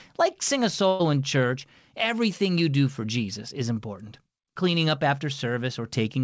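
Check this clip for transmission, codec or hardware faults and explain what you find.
One transmission fault is present: a burst of packet loss between 0.88 and 1.01 s, after "like sing a" and before "in church everything you". A run of packets failed to arrive in time, so the receiver concealed the hole by extending the last sound for about 114 ms and fading it down. The result is a brief held, smeared tone in place of real speech. When the stream resumes, about 120 ms of the original is gone. The call path's bandwidth, ending at 8 kHz, fits a wideband call codec such as G.722.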